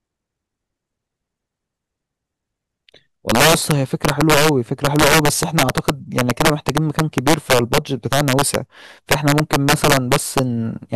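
Integer overflow runs throughout the speech: the signal is driven about 7 dB past full scale, and instead of being limited, each peak over the maximum wraps to the opposite sign. Only a small fraction of samples cross the limit, but each produces a violent crack, far harsher than clipping.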